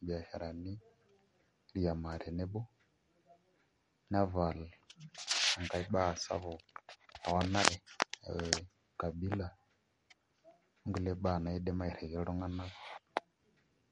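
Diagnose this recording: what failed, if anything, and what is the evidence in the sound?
The failure is at the codec stage, and MP3 compression is the likely cause. The speech has nothing above 11.1 kHz from start to finish. It sounds plainly watery, with swirly sibilants and smeared attacks. Starved of bits, the encoder cut the treble and dropped weak frequency lines, which fits a bitrate near 48 kbps.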